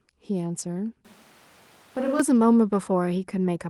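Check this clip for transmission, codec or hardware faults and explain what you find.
There's one fault here, a switch to a distant microphone, running from 1.05 to 2.20 s. The speech suddenly turns roomy and hollow, loses its low end, drops by around 5 dB, and the background noise comes up to sit roughly 30 dB under the speech. Then it snaps back. The likely cause is that the close mic's feed dropped out and the recording fell back on a mic further away, which picks up more room and less of the talker.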